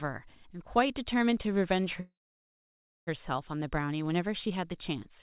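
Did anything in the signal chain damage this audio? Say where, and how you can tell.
Yes, a call audio freeze at 2.0–3.09 s: a short fading tail, then near silence. Speech resumes intact but delayed, likely a network stall emptying the jitter buffer.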